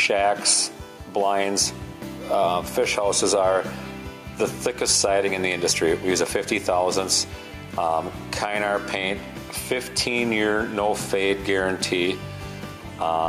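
The audio shows gain pumping from start to finish. The level ducks under each loud sound and swells back up afterwards, swinging by about 5 dB. The likely cause is input gain set far too high, with a fast limiter or compressor pulling it down on every loud sound.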